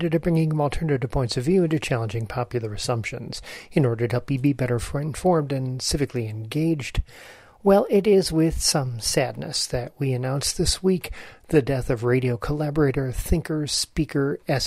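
From 7.21 to 9.56 s the sound runs about 5.6% fast and rises nearly a semitone, then snaps back. From 11.15 to 11.67 s it drops 5.6% slow and about a semitone flat, likely a drift correction step resampling to rebalance a clock-sync buffer.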